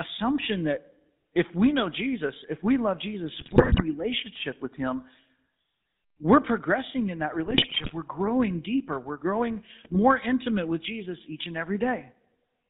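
GSM full-rate codec damage runs through the whole of this speech recording: the band is held to roughly 150 Hz to 3.7 kHz, and the voice has a plainly audible buzzy, gravelly roughness from the coarse pulse-driven excitation, which fits a 13 kbps full-rate stream. GSM bit errors break in at 3.40–3.83 s, at 7.46–7.92 s right after "we're progressing in that", and at 9.84–9.97 s just before "intimate with", where the voice squawks and gargles as corrupted filter, pitch and gain values distort each affected frame, pointing to a few percent of bits flipped on a weak link.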